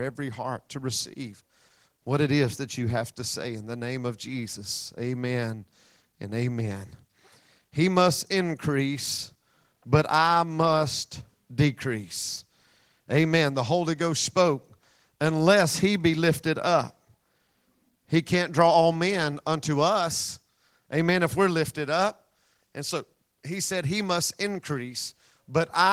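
No technical faults are audible.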